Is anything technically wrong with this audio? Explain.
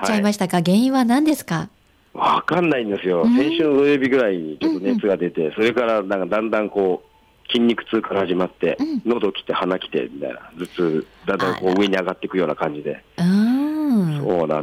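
Yes. Hard clipping occurs throughout. A stage is overdriven by about 4 dB, flattening around one percent of samples; the squared tops add harmonics heard as crackle on peaks.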